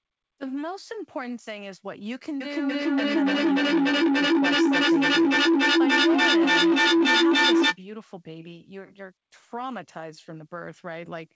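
From 2.41 s to 7.81 s a feedback howl builds as two devices in one room on the same call keep re-feeding each other. Each repeat grows, narrowing to a tone near 300 Hz, with the loop coming round about every 300 ms, and peaks about 13 dB above the speech. A spectrogram shows a bright horizontal band near 300 Hz, and the waveform's envelope swells as the howl builds. Throughout, nothing appears above 8 kHz, which fits a G.722 wideband call path.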